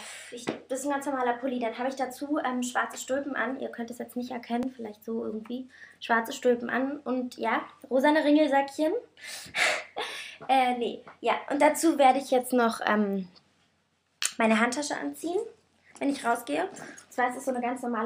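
At 4.63 s and again at 12.30 s there is a repeated buffer: new audio arrived late, so the same 5 ms block replayed, once at the first point and three times at the second. With so small a block, each heard as a brief click or buzz, and no audio dropped out.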